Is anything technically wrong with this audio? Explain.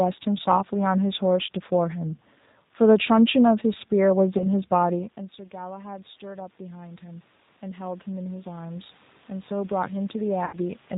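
Yes. Three kinds of fault are audible in this speech.

G.729 codec, throughout: the speech has been squeezed through an 8 kbit/s low-bitrate VoIP codec that resynthesises each short frame from a vocal tract model, a pitch predictor and a handful of pulses rather than keeping the waveform. Here the damage is plainly audible. Everything above 4 kHz is missing, so the voice is dull, and it carries a rough, slightly synthetic texture, with the room noise warbling behind it.

VoIP packet loss concealed by the speech codec, at 4.38–4.47 s and at 10.45–10.56 s: packets failed to arrive and the decoder filled the gaps by extending its last pitch and filter settings at falling gain. The first gap is short, about 20 ms of lost audio, and shows as a brief stretched, fading sound. The second is about 80 ms lost and gives a longer stretched, fading sound. Because each frame depends on the previous one, the voice stays weak and distorted for a moment after audio returns.

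Automatic gain rising, from 4.92 s to 10.77 s: around 5 s the talker moves away and the voice arriving at the microphone drops by about 19 dB. The automatic gain control responds by slowly raising its gain, by about 13 dB in all. The result is a gradual swell over several seconds in which the voice and the room noise grow louder together, while the voice never fully recovers its earlier level.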